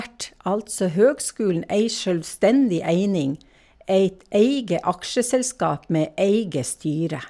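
No technical faults are audible anywhere in the speech recording.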